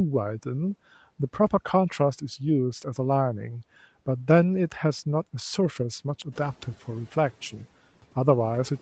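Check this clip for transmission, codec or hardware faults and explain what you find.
One fault is audible, in the noise handling of this speech clip. The band stops at 8 kHz, consistent with a wideband call codec.

Noise suppressor catching up, 6.32 to 6.77 s: the room noise jumps by 10 dB around 6.5 s. The suppressor's noise estimate trails the change, so the louder background passes through underneath the speech, then sinks by about 8 dB over roughly 450 ms as the estimate adapts.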